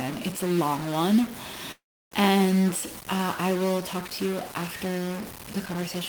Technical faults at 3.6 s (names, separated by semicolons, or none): stuck bit